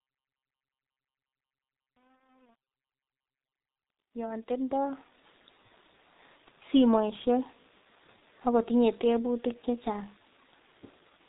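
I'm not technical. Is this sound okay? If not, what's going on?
No. Throughout the clip the speech sounds muffled and rough, like an old internet phone call, with consonants smeared together. That comes from the G.723.1 codec, an early internet-telephony format that squeezes the voice into very little data. It throws away everything above about 3.8 kHz, which removes the crispness, and it handles sound in coarse chunks, which causes the hoarseness.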